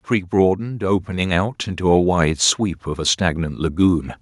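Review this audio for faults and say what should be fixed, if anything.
From 0.32 s to 4.08 s the voice and the background noise swell together, gaining about 8 dB. This is automatic gain rising: the gain control judged the input too quiet and raised its gain gradually. To prevent it, disable automatic gain and set a fixed input level.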